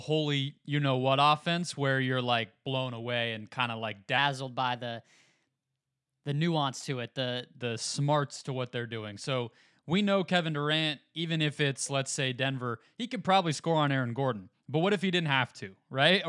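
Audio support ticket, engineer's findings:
Wrong sample rate, 4.18–7.60 s: speech runs about 1.09x fast and about 1.5 semitones high, then snaps back. Probable component: playback/resampler stage. The ratio fits 22 kHz material clocked out at 24 kHz without conversion. Not a pitch shifter: tempo and pitch rise together, steady throughout, with no warble or smearing.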